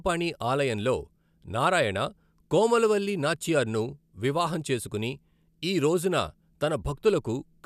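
No technical faults are audible anywhere in this speech recording.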